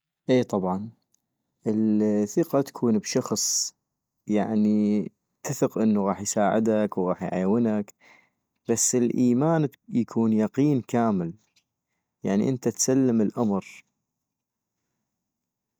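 No technical faults can be heard anywhere in this recording.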